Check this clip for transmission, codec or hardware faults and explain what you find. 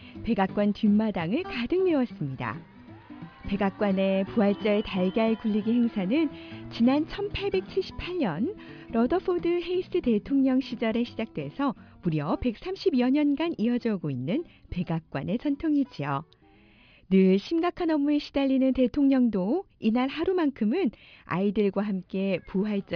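No faults turn up anywhere in this clip.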